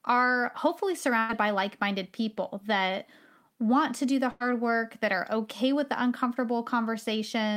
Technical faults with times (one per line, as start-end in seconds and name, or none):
1.19-1.31 burst of packet loss
4.31-4.42 burst of packet loss